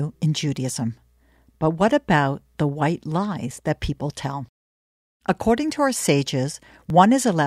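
At 3.51 s, between "what about the white" and "that people tell", and again at 6.90 s, the speech skips ahead a few milliseconds. Both skips are likely a dropped buffer (overrun).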